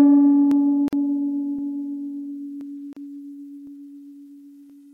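It's a music clip with two kinds of join trouble. First, overlapping chunks: at 0.51, 2.61, 3.67 and 4.70 s, about 25 ms of audio plays twice because each one-second chunk starts before the previous one has finished, so you get a quick stutter-click at each join. Second, there are gaps at joins of encoded pieces: brief dropouts of about 47 ms at 0.88 s and 36 ms at 2.93 s. These come from separately encoded segments being spliced without trimming the encoder delay and end padding, so the music cuts out with smeared edges and then resumes right where it stopped.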